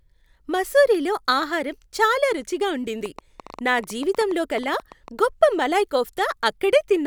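From 3.06 s to 5.20 s, after "మసూరీలో ఆహారం చాలా రుచిగా" and before "గొప్ప మలాయ్", a train of clicks runs at about 9.8 per second with uneven spacing. Some twenty similar pops, peaking several decibels above the speech, tick through pauses too, likely from nearby equipment interference or a faulty connection or power supply.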